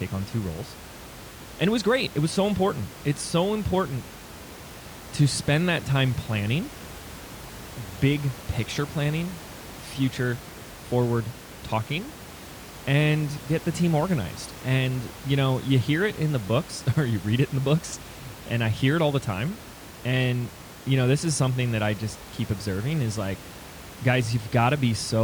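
Nothing in the speech recording points to a technical fault, and the steady room noise underneath it, sitting about 17 dB below the speech, is simply part of the space it was recorded in.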